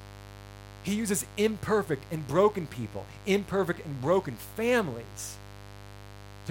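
From start to finish, a mains buzz tied to 50 Hz runs under the speech, about 20 dB below it. Sharp switching spikes arrive twice per mains cycle and scatter harmonics up to several kHz, so it sounds raspy and edged, not like a smooth, low hum.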